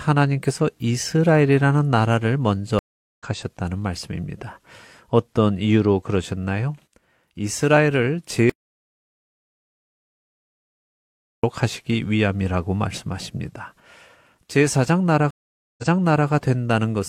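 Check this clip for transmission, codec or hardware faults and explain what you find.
Three faults are audible in the speech: two stream reconnects and one dropout to silence.

Stream reconnect, 2.79 to 3.23 s and 15.31 to 16.29 s: the connection broke and the player restarted its decoder mid-stream. The first leaves 0.39 s of silence and resumes roughly 0.3 s later. The second leaves 0.47 s of silence and jumps back 0.51 s, repeating that stretch.

Audio dropout to silence, 8.50 to 11.44 s: the input was likely lost, perhaps through a disconnected device or failed link, while writing continued. The sound cuts off mid-flow into 2.94 s of silence, with no room tone, and that span is gone.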